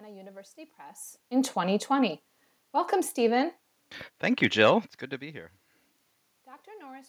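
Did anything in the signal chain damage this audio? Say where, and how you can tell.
No, nothing in this speech recording stood out on listening as damage from any stage of the signal chain.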